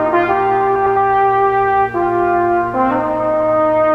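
From 0.75 to 0.97 s, frames arrive out of order: two adjacent blocks of about 104.5 ms each play swapped, which fits runs of four frames. It sounds like a garbled flutter. Unlike a dropout or skip, nothing is missing or repeated.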